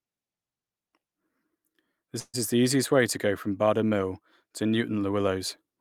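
At 2.19 s the speech stalls for about 0.16 s. The last sound is stretched into a fading buzz, about 140 ms in all, ending in about 30 ms of near silence, before speech resumes at 2.36 s with nothing lost, only delayed. This call audio freeze is likely packets arriving late and the jitter buffer running dry.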